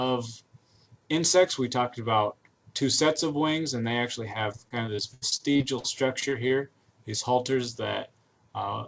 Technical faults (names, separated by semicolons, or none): repeated packet loss (robotic sound)